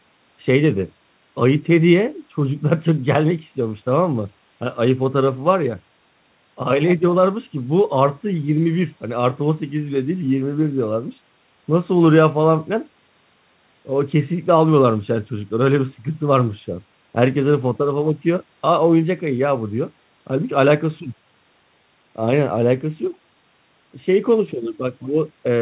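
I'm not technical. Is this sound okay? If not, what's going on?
Yes, this one's fine: it came through an ordinary phone-style call connection, which is why nothing above about 4 kHz comes through, and that's just how such calls normally sound.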